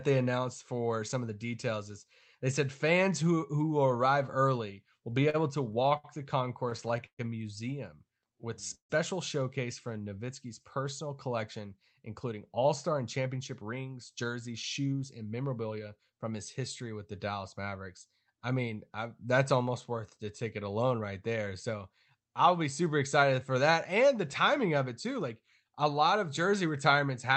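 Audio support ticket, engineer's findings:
Repeated stalls (stutter) in three bursts: 5.01–5.36 s, 5.72–6.06 s, 6.70–7.21 s. Four, four, then five short holds, the longest about 40, 68 and 127 ms. Jitter buffer kept draining on late packets and the receiver stretched the last sound each time. Nothing actually lost, but concealment covers about 19%, 29%, then 33% of each burst, so it gets choppier as it goes.

Jitter buffer slow-down at 8.19–8.45 s (40 ms added, 88% speed) and 9.88–10.26 s (55 ms added, 87% speed). Buffer rebuilding its reserve by repeating single pitch periods, so the speech drags a bit at unchanged pitch.

Call audio freeze at 8.75–8.91 s. The sound hangs, fades, then roughly 120 ms of silence before it picks up where it stopped. Likely packets held up in transit emptying the buffer, adding about 148 ms of delay with nothing dropped.

Jitter buffer speed-up across 12.09–16.20 s, running at 108% with roughly 0.4 s trimmed out in small pitch-period cuts. 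Buffer draining excess delay after the earlier stalls, so that stretch sounds a touch rushed at normal pitch. The Opus path itself is fine, with its top end stopping around 8 kHz.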